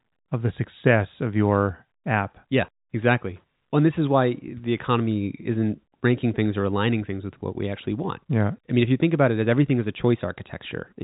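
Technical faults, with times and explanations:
No technical faults are present; the speech carries the expected G.711 telephone coding, with content limited to below 4 kHz and only the faint level-following quantisation hiss typical of a 64 kbps A-law line.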